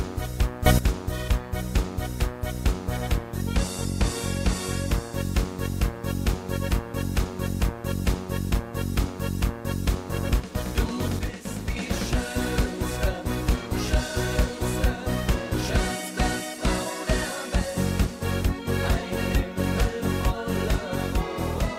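At 0.66 to 0.79 s, a sudden gain jump lifts the sound and its background noise together by about 13 dB, then at 11.19 to 11.77 s another drops them by about 6 dB. Both are likely unramped digital gain changes, appearing on the waveform as instant envelope steps and on the spectrogram as abrupt full-band brightness shifts.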